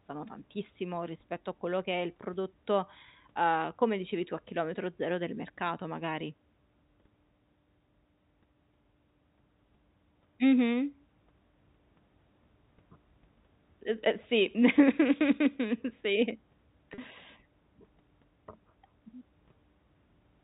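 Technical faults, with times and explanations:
16.94 to 16.98 s, packet loss with pitch repetition: About 40 ms of speech goes missing, which fits two lost 20 ms packets. The receiver fills the gap by repeating the last pitch period it received. The sound briefly holds on one buzzy, steady tone instead of moving on. The gap is short, so it never fades to silence. The speech then resumes through a quick cross-fade, still band-limited by the G.711 telephone coding.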